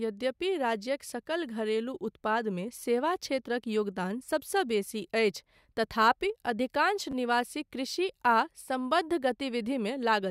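Speech clip with two repeated-buffer stutters, at 2.80–2.82 s just before "क्षेत्रक योगदान सबसँ" and at 7.12–7.14 s just after "तथापि अधिकांश". Each time a 10.67 ms slice, which fits a 512-sample buffer, plays three times with hard joins as the device replays stale data, giving a short stutter with essentially no audio lost.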